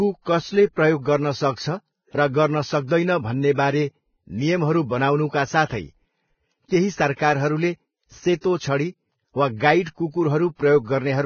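Vorbis compression runs throughout the speech, likely at a very low bitrate, somewhere under 20 kbps. The encoder has removed everything above 6.6 kHz and quantised the remaining treble so coarsely that fine detail turns to grainy hiss, leaving consonants rough and dull.

Pre-echo appears from 8.41 to 8.44 s. A sharp attack landed late in a transform block, and the coarse quantisation noise sized for that loud onset spread back about 33 ms into the quiet before it. The result is a brief hiss ahead of the attack, which sounds smeared.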